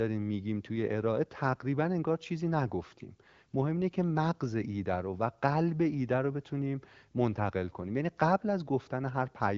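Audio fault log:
No fault to log in this speech audio.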